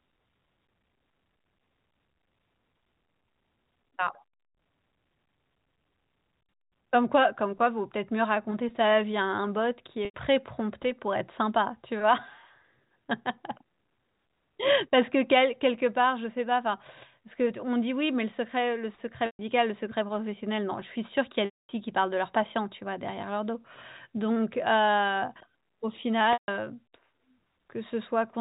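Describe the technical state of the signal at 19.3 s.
At 19.3 s the signal is in a burst of packet loss with pitch repetition, running from 19.26 to 19.39 s, about 130 ms of missing audio, which fits a run of roughly 10 ms packets. The receiver fills the hole by looping the last pitch period of the speech, so it briefly turns into a held, buzzy tone. That tone fades to silence within about 50 ms, and the speech then cross-fades back in, still limited to the 4 kHz telephone band of the G.711 coding.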